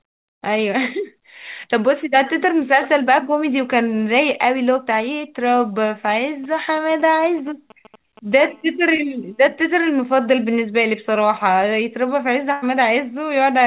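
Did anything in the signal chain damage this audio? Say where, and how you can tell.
Yes. GSM signalling bursts run from 6.44 to 8.34 s in the analogue wiring. A galloping dit-dit pattern of short 217 Hz buzzes, roughly 20 dB below the speech, comes from a nearby 2G phone's idle signalling. The audio circuitry rectifies its radio bursts into audible pulses.

A GSM phone buzz follows from 8.39 to 10.17 s, also at the analogue stage. It is a steady, raspy 217 Hz tone with dense harmonics, about 34 dB under the speech and unrelated to it. This is the same phone's continuous call-mode transmission, rectified into the audio line.

A short concealed packet loss occurs at 8.96 to 9.00 s, on the network side of the call path. The receiver had no audio for about 20 ms and synthesised roughly 19 ms by extending the preceding sound before blending back in. The result is a brief smear under the buzz.

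A burst of packet loss hits at 12.52 to 12.64 s, also in the network. About 100 ms of audio never arrived, and the receiver stretched the last sound and faded it across the gap. The speech then resumes further along, with that stretch missing.

The G.711 mu-law codec carrying the call passes nothing above 4 kHz, as that codec does.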